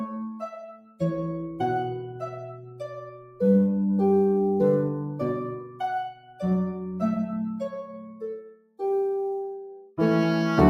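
A faint hiss and grittiness rides on top of the audio from start to finish, thickening on loud and bright passages and disappearing in quiet gaps. This is sample clock jitter: the converter's timing wavers by a few microseconds, producing an error roughly 40 dB below the signal.

Throughout, the sound also pumps and thins, with sustained parts and decays sagging while sharp onsets stay intact. This comes from a noise suppressor applied to music or sounds: a speech-tuned processor treats steady content as noise, swinging the level by around 10 dB.

The sharpest of these dips are sounds cut by the noise suppressor, where held or fading material sinks and then recovers: 0.30 to 0.46 s (about 7 dB), 0.63 to 1.01 s (about 19 dB), 3.14 to 3.40 s (about 8 dB), 5.60 to 5.80 s (about 9 dB), 6.12 to 6.42 s (about 12 dB), 7.84 to 8.23 s (about 10 dB), 8.39 to 8.80 s (about 20 dB) and 9.83 to 9.98 s (about 12 dB).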